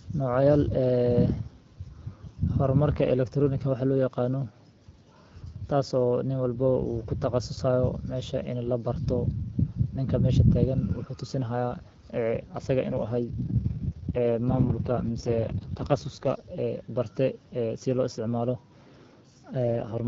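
Speech carried over an HD Voice call, where the AMR wideband coding sounds fairly clean until two AMR rate drops. From 12.90 to 16.48 s, and again from 19.62 s to the end, the voice turns rough and raspy while the bandwidth stays put and nothing cuts out. That points to the network pushing the codec down from around 12.65 kbit/s to its 6.6 kbit/s mode on a weak link.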